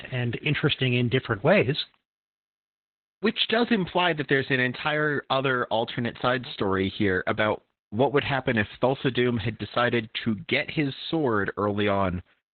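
Throughout, Opus voice compression, apparently SILK at about 8 kbps, narrows the speech below 4 kHz and codes it coarsely, leaving it heavily muffled, hoarse and slightly robotic.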